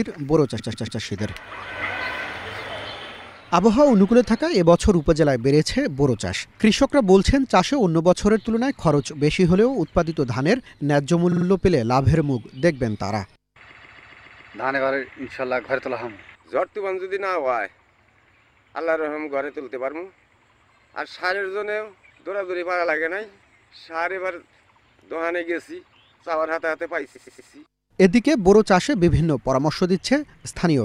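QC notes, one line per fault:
0.58–1.00 s, repeated frames: a 139 ms block plays three more times, a rhythmic stutter. The exact identical loop, not a gap, separates it from dropout.
11.31–11.45 s, repeated frames: a short 46 ms block plays three extra times, a fast stutter, adding 139 ms.
13.70–14.54 s, repeated frames: a 139 ms block plays six extra times, the longest stutter here, stretching the audio by 836 ms. The repeats fall at the same interval each time, unlike random glitches.
27.15–27.49 s, repeated frames: a 116 ms block plays three extra times, adding 348 ms. The loop length fits whole compressed frames of about 23 ms, pointing to a duplicated packet run.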